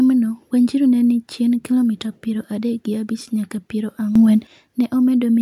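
Right near the end, at 4.16 s, the speech suddenly jumps up by about 11 dB, and the background noise jumps with it, so the whole signal gets louder at once rather than the talker just raising their voice. It holds there until about 4.47 s and then drops back. That's a sudden gain jump, most likely a digital gain setting applied from one sample to the next with no ramp to smooth the change.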